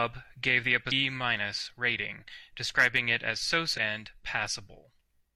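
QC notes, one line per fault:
0.88–0.93 s and 3.73–3.78 s: damaged data in a compressed stream. Each is a brief glitch lasting about 50 ms that cuts into the speech. Corrupted bytes made the decoder misread frames there. It lost sync and skipped forward to the next valid frame header.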